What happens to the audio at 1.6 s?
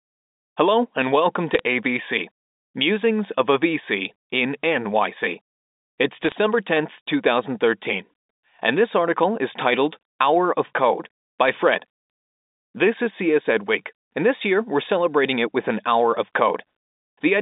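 Bit errors on a digital phone line, 1.54 to 1.6 s, right after "and welcome": flipped bits spike single samples into sharp ticks, seen as thin vertical spectrogram streaks.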